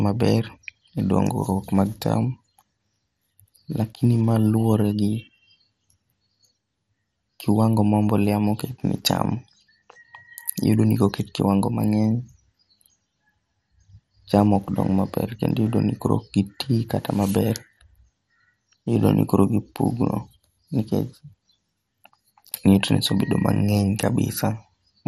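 Throughout the speech, the sound is dulled, with nothing above about 15.8 kHz, and carries a gurgling, granular roughness as upper bands flicker in and out. This is likely MP2 compression at a rate starved of bits, consistent with roughly 64 kbps, where Layer II drops whole sub-bands and coarsely quantises the rest. Unlike a simple low-pass filter, the top end here keeps switching on and off with audible grit.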